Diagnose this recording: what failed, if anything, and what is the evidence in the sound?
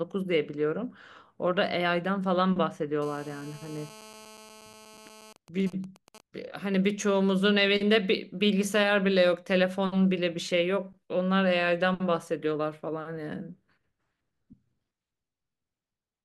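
GSM phone buzz from 3.02 to 5.33 s: a harsh 217 Hz rasp, about 22 dB under the speech, where the analogue wiring rectifies a nearby phone's call transmissions.

Then GSM signalling bursts from 5.36 to 6.21 s: even ticks with a longer 217 Hz buzz twice a second, roughly 20 dB down, as the phone's call traffic thins while its user stays silent.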